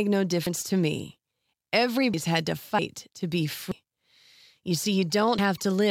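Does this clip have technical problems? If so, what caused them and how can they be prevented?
Yes. Jumps where the speech skips ahead, skipping roughly a tenth to a third of a second, occur at 0.46 s (before "to me"), 2.14 s (before "had to"), 3.72 s (after "to be") and 5.39 s. The likely cause is a dropped buffer (overrun), where audio was overwritten before it was read. Larger capture buffers or giving the recording process higher priority would prevent it.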